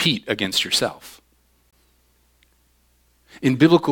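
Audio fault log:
1.71 s, block of digital silence. The speech drops out for about 20 ms and returns abruptly. A run of samples was replaced by zeros, probably because the output buffer was not filled in time. There is no fade on either side. The signal jumps straight to zero and straight back. At about 20 ms the gap is long enough to be heard as a short hole rather than a single tick.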